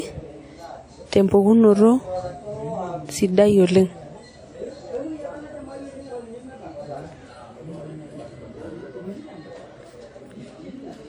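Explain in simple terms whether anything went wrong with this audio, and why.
Two things went wrong here. The first is a run of word clock ticks from about 0.37 s to 10.78 s: sharp little clicks of uneven strength, roughly every 0.4 s, about thirty in all. They happen when one digital device passes audio to another that runs on its own clock. The two clocks were off from each other by something like 50 parts per million, so every time they drifted a sample apart, one sample got dropped or doubled, and you hear a tick.

The second runs through the whole clip. The speech has a plainly audible ringing, washy quality, with a hiss that swells and fades along with the voice, which points to WMA compression as the likely cause. That kind of codec chops the sound into fairly long blocks and saves space by storing it coarsely. The resulting noise smears over tens of milliseconds around each sound instead of staying put, and the quieter details get thrown away.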